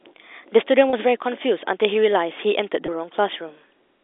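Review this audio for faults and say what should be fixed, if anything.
Packet loss with pitch repetition at 0.9 s (30 ms gap) and 2.86 s (20 ms): the last pitch period loops, so you hear a brief buzzy hold rather than a silent dropout or click. A deeper jitter buffer or forward error correction on the network link would prevent it.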